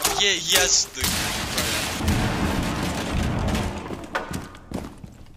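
From 0.0 to 2.0 s, pre-emphasis left on. The treble boost, fitting a J.17 curve, was never undone. Highs sit about 11 dB up at 10 kHz, sounding thin, bright and sibilant.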